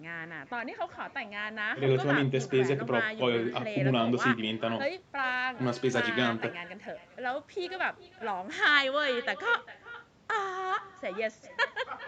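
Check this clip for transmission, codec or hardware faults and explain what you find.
Two faults are present. The call path's normal band limit keeps everything below 8 kHz.

Echo with no canceller runs throughout. A loudspeaker feeds the far microphone uncancelled, so every phrase returns about 0.4 s later, about 16 dB quieter and thinner.

A Bluetooth SBC bit pool drop occurs from 4.82 to 8.72 s. Congestion starves the upper sub-bands, which fits the bit pool halving. Treble dulls and gritty noise rises.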